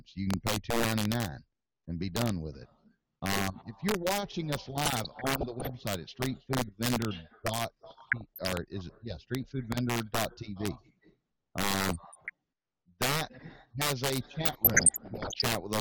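Integer overflow runs throughout: peaks driven about 7 dB past full scale wrap to the opposite sign instead of limiting, giving violent cracks on around one percent of samples. DAB burbling occurs at 4.85 to 5.72 s, 7.84 to 8.53 s, 11.80 to 12.30 s and 14.44 to 15.42 s. Bit errors of under one percent slip past error correction and put short blips of noise into individual sub-bands, and where scale factors are hit, make sub-bands jump in level.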